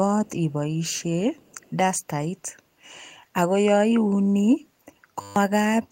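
An echo canceller at a loudspeaker end likely let part of its microphone pickup through, so an echo leak returns a faint copy of the speech delayed by 342 ms, far below the direct sound, at 0.26 to 0.31 s, 0.85 to 1.03 s and 1.38 to 1.71 s.

From 5.21 to 5.36 s the system froze while the audio hardware kept replaying one 10 ms stretch of its ring buffer. That system hang loop repeats the fragment fifteen times, producing a steady 100 Hz buzz where about 150 ms of speech is lost.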